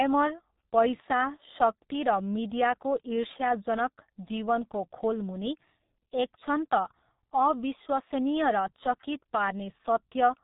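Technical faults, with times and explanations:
Throughout: G.723.1 codec. The speech is band-limited with nothing above 3.8 kHz, so it sounds muffled. Heavy coding damage, consistent with the codec's 6.3 kbit/s mode, gives a hoarse texture. Its slowly updated voice model across 30 ms frames blurs consonants.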